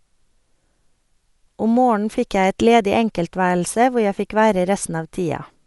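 From start to finish, the speech carries plainly audible codec damage. It is likely Dolby Digital compression at a low bitrate, and the sound fits a rate near 64 kbps. Nothing remains above 11.5 kHz, so the top end sounds dull. The encoder had too few bits to code every frequency line. Many lines got no detail and were refilled with noise when decoded. That leaves a rough, fluttering grain around the voiced tones.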